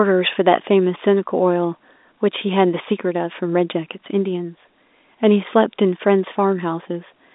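No technical faults can be heard anywhere in this speech.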